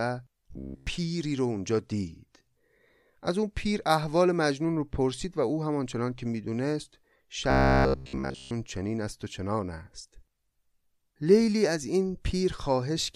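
From 0.52 to 0.87 s, and again from 7.50 to 8.51 s, the speech collapses into robotic sound from repeated short buffers: a rigid, metallic buzz at about 66.7 Hz that still roughly tracks the syllables. That pitch fits a 15 ms stretch of audio being looped over and over, likely because fresh data stopped arriving in time. Essentially nothing new gets through, and the steady fixed pitch separates it from the silent gaps or clicks of plain dropouts.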